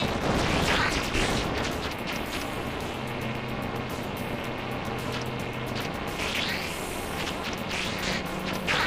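Throughout the clip, overlap-add ripple chops the sound into a harsh, metallic buzz at around 300 Hz. Windowed frames were rejoined with an overlap that fails to sum to constant gain, so level dips about 60 dB once per frame, drawn as evenly spaced vertical stripes on a spectrogram and a comb-like envelope on the waveform.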